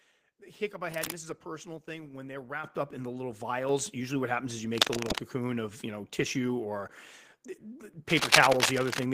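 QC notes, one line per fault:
2.64 s and 3.69 s, microphone volume stepped up: input level jumps about 8 dB after "personal thing when they're", then about 5 dB after "up in the little". Voice and background rise together as the input volume is raised, seen as abrupt steps in waveform amplitude and spectrogram brightness.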